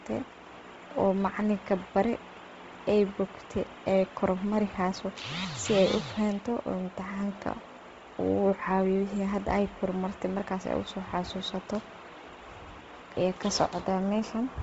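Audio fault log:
Throughout, Bluetooth LC3 compression: the speech has nothing above 7.7 kHz and carries a heavy breathy, grainy edge on its upper frequencies. This is likely LE Audio's LC3 codec working at a low bitrate, where many upper-spectrum bands get too few bits, are zeroed, and are refilled with noise. The damage level points to roughly 24 kbps, and the fine time texture fits short 7.5 ms transform frames.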